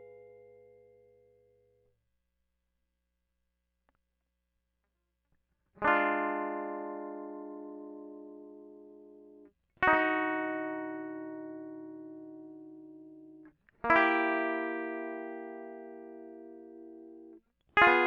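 A music recording with nothing technically wrong with it.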